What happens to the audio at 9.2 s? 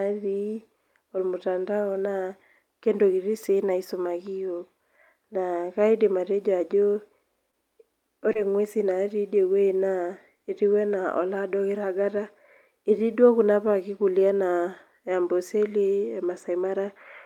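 Nothing goes wrong at 9.2 s: the speech carries on intact through that moment, with no dropout, click, distortion or other fault to be heard.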